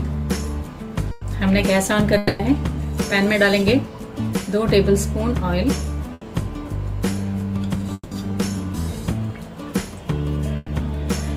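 At 1.11 to 1.23 s a burst of packet loss replaces about 100 ms of audio with the preceding sound held and fading. On a spectrogram this shows as smeared, frozen bands that dim, and the waveform then jumps ahead with the skipped material missing.

From 2.17 to 2.41 s a long network dropout likely causes about 220 ms to be lost. The last sound is stretched into a decaying buzz or hiss, visible as a tapering, featureless block before normal detail returns further on.

At 6.13 to 6.23 s another burst fills about 80 ms the same way.

From 7.93 to 8.13 s a second dropout likely covers about 180 ms. The concealment fades into about 30 ms of flat silence, a blank gap in the waveform.

At 10.56 to 10.70 s a final burst conceals about 120 ms before the audio resumes later.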